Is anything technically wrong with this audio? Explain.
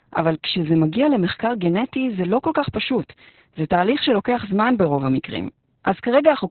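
Yes. Throughout the speech there is heavy Opus voice compression: SILK-mode narrowband coding cuts everything above about 4.3 kHz and roughly models the excitation, which fits roughly 6 kbps. The voice sounds muffled, hoarse and faintly robotic. Unlike a plain low-pass filter, it adds this rough, synthetic texture.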